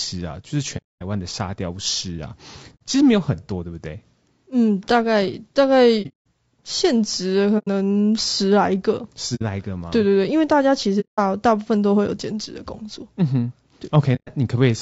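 Throughout the speech, likely low-delay AAC compression (AAC-ELD) at a rate that sounds near 32 kbps leaves voices rough and grainy, with noise between harmonics.

AAC frame loss with muting: the decoder zeroed lost frames, so soft-faded gaps appear at 0.77–1.02, 2.75–2.81, 6.02–6.26 (broken, longest near 200 ms), 7.58–7.68, 9.35–9.42, 11.00–11.19 and 14.15–14.30 s.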